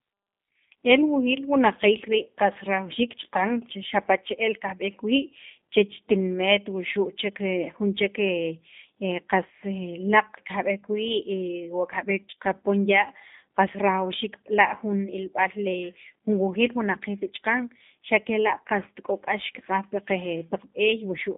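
From start to finish the speech sounds thin, slightly rough and synthetic, with a band confined to roughly 200 Hz to 3.6 kHz, so sibilants lose their sparkle. This is G.729 codec damage, plainly audible here: the codec rebuilds each short frame from a vocal tract filter, a pitch predictor and a few coded pulses rather than the actual waveform. The result fits a G.729A stream at 8 kbit/s.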